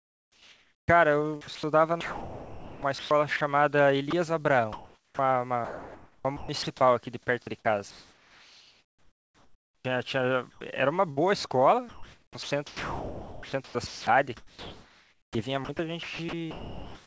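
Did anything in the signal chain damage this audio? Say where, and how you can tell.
Yes. Three kinds of fault appear, all at the call-processing stage. The audio is band-limited with nothing above 8 kHz, which fits a G.722 call path.

Comfort noise in place of the background: from 0 to 0.88 s, and again from 7.91 to 9.85 s, the room tone turns into a smooth, featureless hiss. It is about 4 dB quieter in the first stretch and about 8 dB quieter in the second. The real background sits roughly 41 dB and 33 dB below the loud passages. The likely cause is discontinuous transmission: the sender stopped transmitting during silence, and the receiver synthesised noise shaped to the background.

Onset clipped by the voice detector: the speech snaps in abruptly at 0.86 s and at 7.63 s, each losing about 20 ms of its soft attack. From 9.79 to 9.85 s a longer 60 ms beginning is missing. In each case synthetic noise stands where the start of the sound should be. 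The voice detector was likely late to register that speech had resumed, so those first moments were never sent.

Sound chopped by the voice detector: the speech turns choppy from 1.41 to 3.41 s, from 4.11 to 6.67 s, and from 10.51 s to the end at 17.06 s. Quiet syllables and word edges drop out. About 1.1 s, 1.3 s and 3.7 s are lost in those three stretches. This is likely the voice detector toggling transmission on and off repeatedly, with comfort noise filling each gap.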